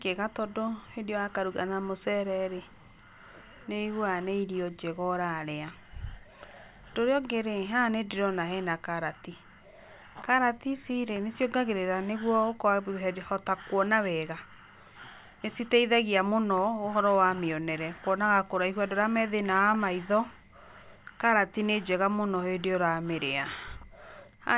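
Nothing stood out on listening to this speech recording.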